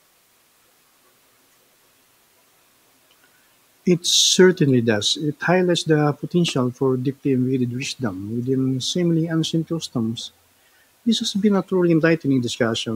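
From start to finish the speech sits on low bit depth with dither: about 10 bits, rounding error spread into a steady, even hiss roughly 40 dB down, no distortion.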